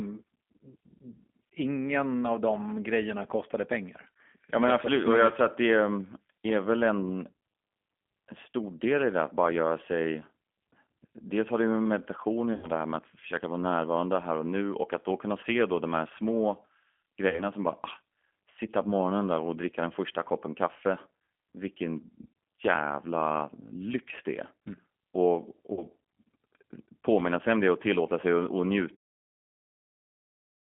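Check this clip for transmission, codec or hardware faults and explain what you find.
Two kinds of fault are present. The speech has been through a G.729 codec for its whole length. There are also three bursts of VoIP packet loss concealed by the speech codec.

The G.729 codec damage is plainly audible throughout. The band runs from about 200 Hz to 3.4 kHz, a narrow telephone line. The codec does not send the waveform. It sends a vocal tract filter, a pitch predictor and a few pulses per frame, and the decoder rebuilds the speech from those. That model-based rebuild gives the voice a rough, synthetic quality. It points to G.729A at 8 kbit/s.

The packet loss falls at 12.53–12.70 s, 17.29–17.43 s and 25.73–25.83 s. The first gap is about 100 ms of missing audio, and the other two are about 40 ms each. That fits 20 ms packets, five lost in the first burst and two in each of the others. The decoder fills each gap by repeating its last pitch and filter at falling gain. 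The speech smears into a buzzy tone or coloured noise that fades. Because each frame builds on the one before, the voice stays weak or distorted for a while after the packets return.

Near 29 s there is a smooth fade-out, with no step or click.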